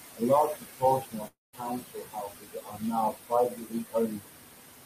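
Throughout, the background pumps, sinking between phrases and surging under them. These are noise suppressor artifacts: the suppressor pulls bands it judges to be noise down by about 20 dB, frame by frame, working against room noise sitting about 8 dB below the speech.

From 0.47 to 0.83 s, parts of the speech sound swallowed and faint, about 150 ms in all, dipping by up to about 19 dB. This is speech cut by the noise suppressor, which mistook those soft sounds for background.

A longer stretch of the same speech cut by the noise suppressor runs from 1.0 to 2.94 s. Roughly a second and a half of speech is turned down, by up to about 22 dB.

Inside that stretch, at 1.27 s, the sound smears into a fading buzz for about 250 ms, then goes silent for about 170 ms. Speech resumes at 1.55 s, with about 260 ms of it gone. The likely cause is a long network dropout, with the receiver stretching the last sound before giving up.

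Further speech cut by the noise suppressor follows from 3.11 to 3.32 s, roughly a tenth of a second dropping by up to about 20 dB. From 3.48 to 4.27 s, about 0.7 s of speech fades by up to about 21 dB.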